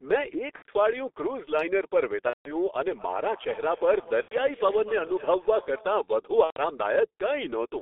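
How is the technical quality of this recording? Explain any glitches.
The quality is poor. Heavy low-rate codec damage runs through the whole speech clip, and four short dropouts interrupt it.

The G.723.1 codec colours everything. The sound is confined to roughly 300 Hz to 3.6 kHz, so it is muffled. The coding points to a rate near 6 kbit/s. A slowly updated voice model in 30 ms frames leaves speech hoarse and consonants smeared.

VoIP packet loss concealed by the speech codec occurs at 0.57–0.67 s, 2.27–2.53 s, 4.22–4.37 s and 6.44–6.57 s. Missing packets were replaced by extrapolating the last pitch and filter with falling gain. Each gap becomes a buzzy tone or coloured noise that fades and is muted from the third lost frame, and the longest, near 2.3 s, has the longest muted stretch. The gap lengths fit the loss of whole 30 ms frames.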